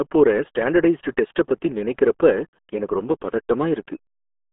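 Throughout, the speech carries RealAudio 14.4 codec damage: heavy, gargly low-rate coding consistent with an 8 kbit/s stream, band-limited to roughly 250 Hz–3.4 kHz, with nothing above 3.8 kHz.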